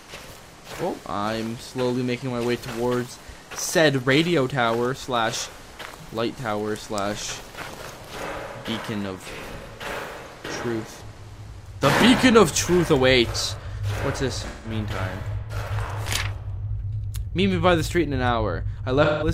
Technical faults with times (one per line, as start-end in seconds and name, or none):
14.47-14.71 AAC frame loss with concealment
19.04-19.28 AAC frame loss with concealment